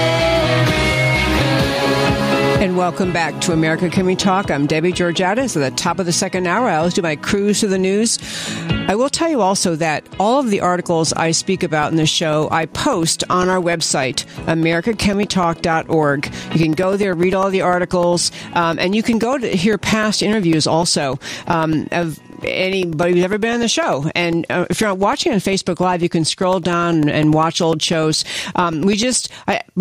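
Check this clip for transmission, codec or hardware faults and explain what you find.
Two faults are present. Gain pumping runs through the whole clip. Input gain was likely set far too high, so a fast limiter clamps down on every loud sound. Level swings of about 10 dB leave the sound squashed.

Periodic USB or driver dropouts run from 11.83 s to 29.73 s. Something blocks the USB bus or audio driver every 0.1 s, and each time a couple of milliseconds of audio is replaced by silence. This produces a steady ten-per-second ticking wherever there is signal.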